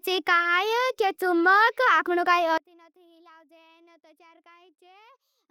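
A speech recording in which, from 2.58 s to the end at 5.51 s, the level collapses by about 32 dB and the voice becomes a faint residue. The likely cause is one channel inverted: reversed polarity on one side cancels the centred speech when summed to mono.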